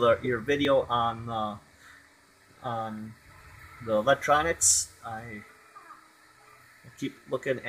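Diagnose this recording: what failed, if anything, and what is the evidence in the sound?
The fault sits at the driver or buffer stage, most likely a dropped buffer (overrun). Abrupt jumps in the sound occur at 0.65, 3.41, 4.71 and 7.00 s, with no gap of silence. Roughly 30 ms goes missing at 0.65 s and about 10 ms at each of the others. The waveform shows a hard discontinuity at each point, and the spectrogram shows a thin vertical broadband line where the two sides of the missing audio are butted together.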